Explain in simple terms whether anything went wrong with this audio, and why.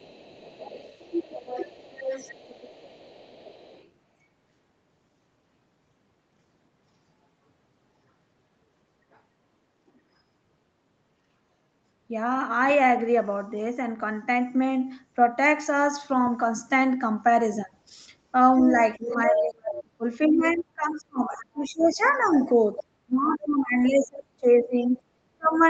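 Yes. There is other side's voice leaking through: a second, fainter voice under the speech at 0.0–3.9, 9.13–9.19, 18.58–20.56, 21.64–23.45 and 24.96–25.67 s, likely an echo canceller missing loudspeaker sound. There is also speech suppressed in double talk: from 18.72 s to the end, the main voice itself dips sharply or breaks up rather than gaining an extra voice, likely from both sides talking at once.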